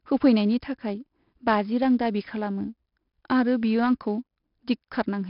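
From start to finish the speech carries 4-bit ADPCM compression, and it's heavy. Each sample is coded as a coarse step from a prediction, so a gritty hiss rides on every loud syllable. Nothing comes through above 5.3 kHz, which fits a rate around 44 kbps.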